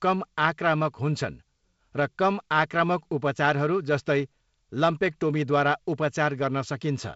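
No technical faults can be heard in the speech, which carries the character of G.722 wideband telephone coding at 48 kbit/s, with content reaching up to about 7.7 kHz and only the light coding hiss and lower-band graininess expected at that rate.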